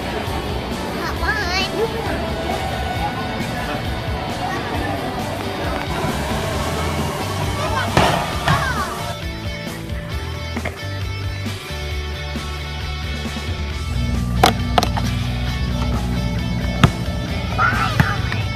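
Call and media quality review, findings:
Train of clicks, 5.41 to 6.32 s. About five sharp, similar-shaped pops at roughly 4.5 per second, unevenly spaced, peaking about 15 dB above the surrounding audio. Impulses are added on top of the sound, not in it. Likely cause: electrical interference from nearby equipment or a faulty connection or power supply injecting brief pulses into the signal path. Check grounding, cabling and interface/driver stability around that window.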